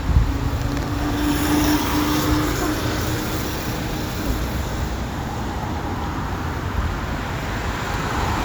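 Nothing goes wrong anywhere in this recording; there are no faults to point to at any moment.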